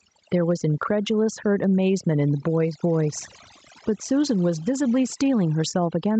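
Across the whole speech clip the background sits at near silence, broken by small twinkling specks, and the voice comes through with its quieter parts seeming to dissolve. That is overdone noise removal. The noise reducer was set so aggressively that any frequency band close to its noise estimate was pulled right down or switched off, taking soft speech detail along with the noise. The level also breathes throughout, ducking each time the speech gets loud, by something like 10 dB, leaving loud and soft passages squeezed together and the whole thing sounding squashed. This is gain pumping, likely from microphone gain set far too high with a fast limiter or compressor clamping down on every loud sound. Nothing is heard above 8 kHz, as expected from the call path's bandwidth limit.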